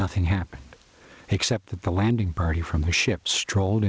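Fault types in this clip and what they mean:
Gain pumping: The level rises and falls with the speech throughout the clip. The swing is roughly 10 dB. Loud and quiet passages end up close in level, so the speech sounds squashed. The likely cause is input gain set far too high, with a fast limiter or compressor clamping it on every peak.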